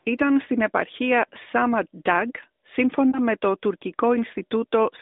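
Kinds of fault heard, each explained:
lost AMR speech frames: Radio errors corrupted a speech frame, so the decoder bridged the gap by repeating its last good pitch and vocal tract settings at lower gain. Around 3.1 s this causes a brief dip or warble, short enough to fit one lost 20 ms frame.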